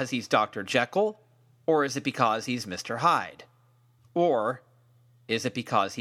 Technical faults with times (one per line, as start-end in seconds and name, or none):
none